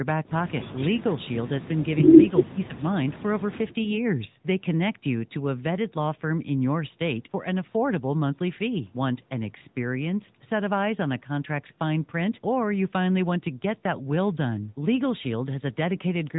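Throughout, the AMR narrowband mobile codec leaves a buzzy, synthetic tone; the spectrogram is empty above 3.8 kHz, and the plainly audible damage fits roughly 10 kbps. From 2.48 to 2.74 s the speech dips by about 20 dB for roughly a fifth of a second, a visible notch in the waveform, likely speech suppressed in double talk.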